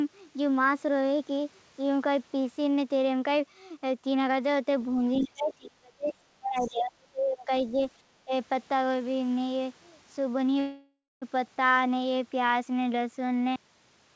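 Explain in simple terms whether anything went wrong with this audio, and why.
Several things went wrong. Speech suppressed in double talk: the talker's speech turns down sharply or drops out at 5.2 to 6.14 s, 6.39 to 7.77 s and 8.11 to 8.32 s, likely because the echo canceller muted everything while both sides spoke.

Other side's voice leaking through: faint scraps of a second voice appear briefly at 5.23 to 5.28 s and 6.58 to 6.71 s, likely loudspeaker echo the canceller missed.

Call audio freeze: from 10.6 to 11.24 s the sound stretches into a fading buzz, with about 0.2 s of silence, likely late network packets. Speech then resumes where it paused, with nothing lost.

Cut-off end: at 13.56 s the audio stops mid-sound and drops straight to silence with no natural fade, because the final stretch was never recorded.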